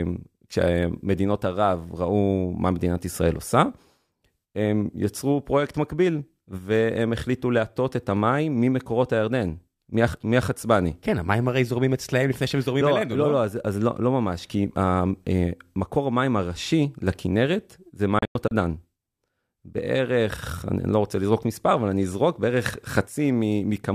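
Around 18.19 to 18.52 s there's a digital broadcast dropout: the receiver mutes in quick 3 ms fades, leaving several holes, about 160 ms lost, longest 96 ms.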